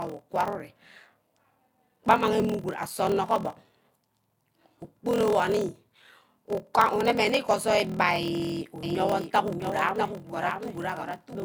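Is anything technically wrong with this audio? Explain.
Yes, there are two faults.

A block size mismatch (padded) runs through the whole clip. One stage writes shorter blocks than the next stage reads, and the shortfall in each block is filled with silence. The pattern fits 1024-sample blocks being read as roughly 1152. Each tiny gap recurs at 41.7 Hz, producing a steady low buzz under the speech. The padding also stretches the timeline, so the speech plays at about 0.89 times normal speed while keeping its timbre.

A doubled audio track appears from 8.83 s to the end. A second full-band copy of the speech enters abruptly and trails the original by about half a second, roughly 5 dB quieter. It has no reverberant tail or room colouring, so it sounds like a clean repeat rather than an echo from a space. The likely cause is the same signal being captured a second time through a slower path and mixed back in.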